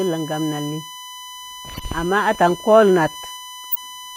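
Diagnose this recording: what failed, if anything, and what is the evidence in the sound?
A USB whine, introduced at the analogue wiring and power stage, runs through the whole recording as a steady 1 kHz tone about 20 dB below the speech. On a spectrogram it is a flat horizontal line at 1 kHz. It comes from the bus's 1 ms frame current leaking into the audio path through power or ground.

A corrupt frame was decoded at the codec stage at 1.74–1.83 s and again at 3.72–3.77 s. Each is heard as a chirp, squeak, blip or burst of noise peaking around −15 dBFS and −10 dBFS respectively, and the first also skips about 20 ms of audio. On a spectrogram each shows as a short block of energy at frequencies that do not belong there. The damaged frames, about four in the first event and two in the second, were decoded anyway.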